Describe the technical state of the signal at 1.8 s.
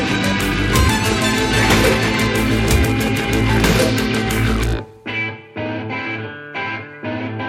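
At 1.8 s the music carries sample clock jitter, present throughout: sub-microsecond timing wobble adds hiss roughly 45 dB down, rising with loud, bright passages and showing as a signal-following spectrogram noise haze.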